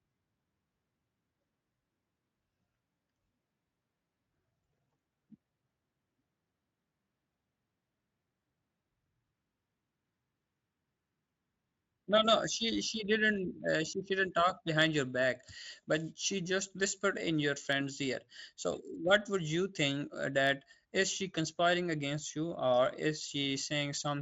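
No technical faults occur at any point in the speech, so there is nothing to describe in time order.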